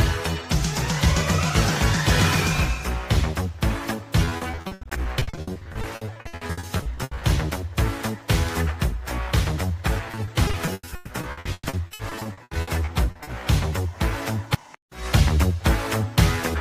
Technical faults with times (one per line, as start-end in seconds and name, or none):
4.25-7.23 repeated packet loss (robotic sound)
10.11-13.29 repeated packet loss (robotic sound)